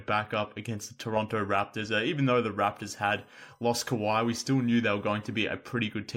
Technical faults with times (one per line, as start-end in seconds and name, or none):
2.98-5.42 USB whine